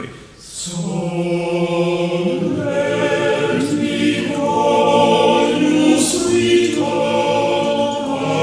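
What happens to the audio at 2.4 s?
Nothing goes wrong at 2.4 s: the audio carries on intact through that moment with no audible fault.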